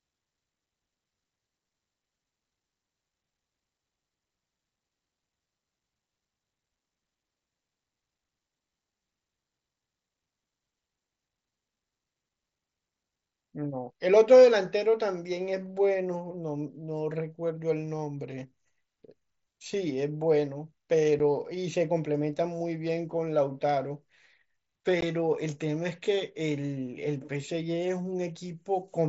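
At 21.19 s and again at 25.01 s, the speech cuts to a sudden, hard-edged hole, 7.5 ms long and then 15 ms. This is unconcealed Bluetooth headset packet loss on the mSBC link: voice packets between headset and phone went missing, one and then two, and silence or an idle pattern replaced them instead of patched-over sound.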